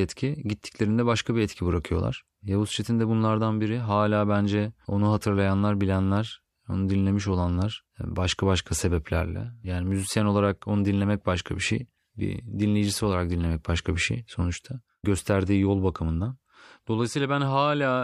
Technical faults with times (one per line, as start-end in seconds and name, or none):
none